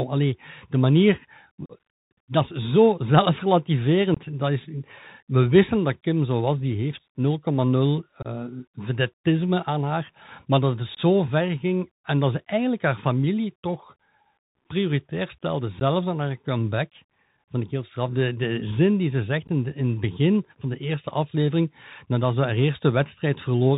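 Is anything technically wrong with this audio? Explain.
Yes. The speech carries two faults: Bluetooth CVSD headset codec coloration throughout, and six brief dropouts from unconcealed Bluetooth headset packet loss.

For the whole 24 seconds the audio runs through the narrowband CVSD headset codec at 64 kbps. The codec sends a single up-or-down bit per sample and adapts its step size. Nothing survives above 4 kHz, so on a spectrogram everything above that line is empty. Loud, bright moments outrun the step and distort, s sounds turn scratchy, and a granular hiss sits under the speech. In the waveform that hiss appears as a fine, grainy floor.

The packet loss punches short holes at 1.66 to 1.72 s (about 37.5 ms lost), at 4.14, 8.22 and 10.95 s (about 22.5 ms each), and at 15.80 and 19.47 s (about 15 ms each). Each gap points to a handful of missing voice packets between headset and phone, filled with silence or an idle pattern rather than concealed. 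The waveform shows flat stretches with abrupt edges, and the spectrogram shows thin vertical blank strips. The speech resumes briefly quieter after each gap.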